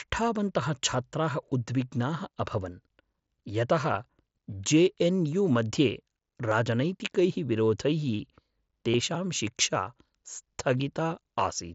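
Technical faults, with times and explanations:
3.94 s, 6.51 s, 8.91–8.94 s and 10.78 s, concealed Bluetooth headset packet loss: the link dropped audio, and the phone patched each gap by repeating a recent stretch of waveform. The 7.5 ms blips barely register, while the 30 ms run at 8.91 s buzzes briefly with a slight warble on recovery, over the mSBC codec's faint graininess.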